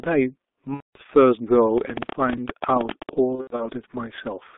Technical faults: G.723.1 codec; VoIP packet loss concealed by the speech codec; train of clicks

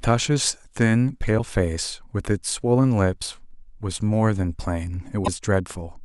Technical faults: damaged data in a compressed stream

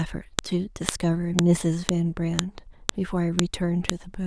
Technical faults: file header played as audio

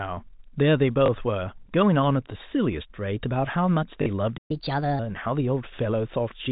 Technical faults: packet loss with last packet repeated; playback stall; catch-up at higher speed

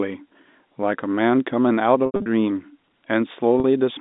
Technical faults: packet loss with pitch repetition

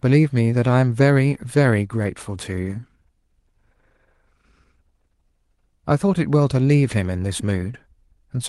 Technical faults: none

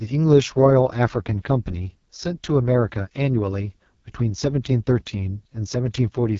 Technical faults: AMR wideband (HD Voice) codec

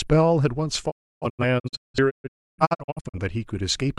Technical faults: digital broadcast dropout

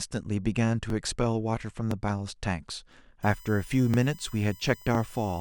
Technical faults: overlapping chunks; USB whine

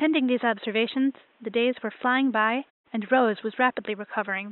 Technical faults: none

